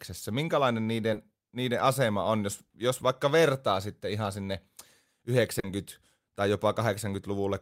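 Speech clip with short concealed packet loss twice: 20 ms missing at 1.13 s and 40 ms at 5.59 s, each patched by extending prior sound, leaving brief smeared wobbles.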